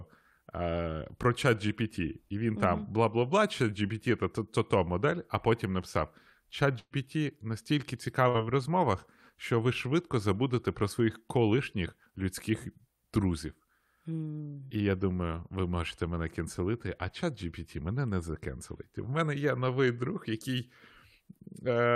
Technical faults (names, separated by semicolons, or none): burst of packet loss